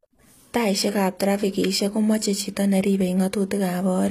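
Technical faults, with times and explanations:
Throughout, HE-AAC compression: the signal was likely coded with HE-AAC at a low bitrate, fitting about 24 kbps, so the treble is rebuilt from copied lower bands rather than kept. The s sounds come out gritty and metallic, with nothing above 14.9 kHz.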